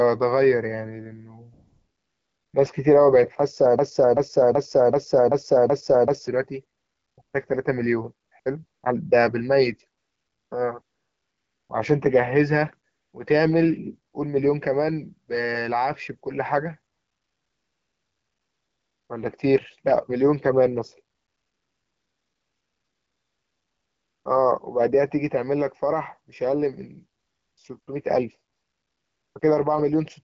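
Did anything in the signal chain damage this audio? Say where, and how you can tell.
Yes. AMR comfort noise appears in sixteen pauses from 1.53 to 29.41 s, lasting 20 ms to 3.1 s. Call processing halted speech frames, and smooth synthetic noise filled the gaps.

A broken-record loop runs from 3.79 to 6.28 s: a 382 ms fragment repeats seven times, likely a stalled stream resending its last buffer.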